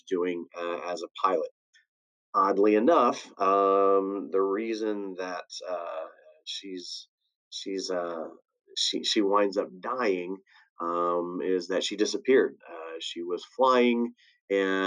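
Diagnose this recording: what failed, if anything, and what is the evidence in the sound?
The failure sits in call processing: the noise suppressor mistook part of the sound for noise and turned it down. From 6.09 s to 6.44 s the level sinks, by about 21 dB at its deepest, and the affected stretch totals roughly 400 ms. Unlike a dropout or lost packet, which leaves a hard gap, the sound here is attenuated rather than removed, because the suppressor lowers its gain on what it classifies as noise.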